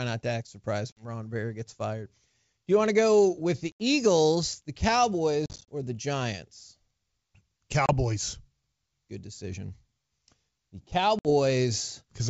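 Speech on a G.722 wideband call drops out five times with packet loss on an ADPCM call: at 0.92–1.05 s after "not to act surprised" (50 ms lost), 3.72–3.81 s after "to go with the" (80 ms), 5.46–5.69 s before "or the" (120 ms in short gaps, longest 40 ms), 7.86–7.93 s (30 ms) and 11.19–11.30 s (60 ms). Each hole is hard-edged silence, a flat gap in the waveform and a blank vertical stripe on a spectrogram. Afterwards the decoder's predictor and step size no longer match the sender's, so speech returns with brief, slight distortion.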